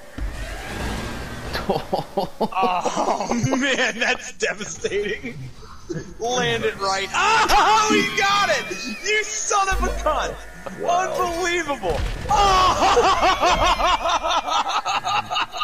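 A corrupt frame decoded at 3.39 to 3.47 s puts a short, fairly loud burst into the audio, lasting about as long as a few damaged codec frames. Bits in the compressed data were flipped, and the decoder played those frames anyway. Misread codes and wrong gains sent energy to frequencies where it doesn't belong, so instead of the surrounding sound there is a brief chirp of noise peaking not far below full scale. A drift correction step follows from 6.79 to 7.79 s. The playback speed jumps up by 5.69%, raising the pitch by 95.8 cents, almost exactly a semitone, and it snaps back to normal a second later. The likely cause is clock-matching software changing the rate in a single jump to refill or drain its buffer. Because speed and pitch move together, the whole stretch sounds detuned and slightly hurried.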